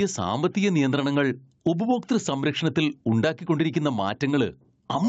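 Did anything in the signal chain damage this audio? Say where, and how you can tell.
Yes. Gain pumping runs through the whole clip. The swing is around 10 dB. Loud and quiet passages sit too close in level, so the speech sounds squashed. The likely cause is input gain set far too high at the microphone stage, with a fast limiter or compressor pulling it down on every peak. The missing top above 8 kHz is just the call codec's normal bandwidth.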